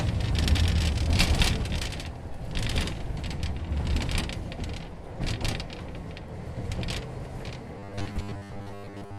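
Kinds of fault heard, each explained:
Robotic sound from repeated short buffers: fresh audio likely stopped arriving in time, so the playback kept looping a short stretch of what it already had, about 10 ms long, while most of the real material was skipped. From 7.79 s to the end at 9.19 s, the sound turns into a rigid, metallic buzz locked at 100 Hz, with only a rough trace of the original sound's shape still showing through the repetition.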